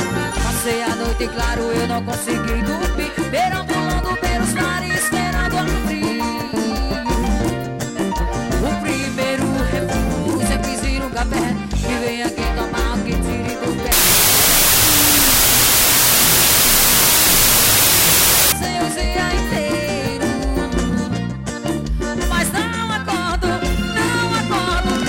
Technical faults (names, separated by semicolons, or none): wrong sample width